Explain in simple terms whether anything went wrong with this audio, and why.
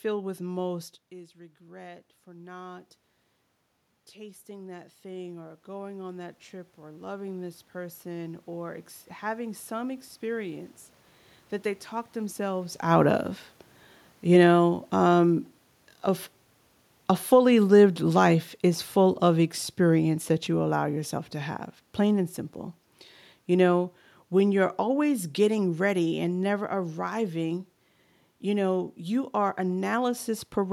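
Automatic gain rising: from 4.13 to 10.77 s, the level control, finding the input too quiet, slowly turned itself up, so the voice and room noise swell together.

Automatic gain falling: from 17.12 to 22.35 s, the same control judged the sound too loud or its background too strong and eased down, so the voice and background sink together.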